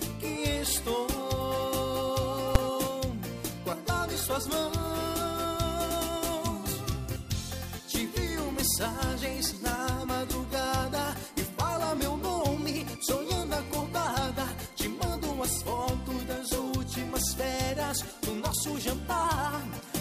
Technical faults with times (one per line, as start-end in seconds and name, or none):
2.55 invalid numbers at full scale